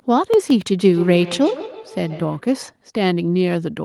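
From 0.34 to 0.67 s the processor falls behind and misses a run of deadlines, roughly ten in a row, on very short buffers of under a millisecond each. Each time it misses, the output holds a scrap of old audio with hard edges instead of fresh samples. This is processor overload crackle: a brief gritty tearing laid over the speech that clears as soon as the load drops.

From 0.79 to 2.48 s a second device in the same room is on the call, and its playback of this speech reaches the first microphone again, which the first device's echo canceller cannot remove because it only removes its own playback. The result is feedback echo between two devices: the speech returns roughly every 150 ms, peaking about 14 dB below the direct sound, each return thinner and more ringing than the speech itself.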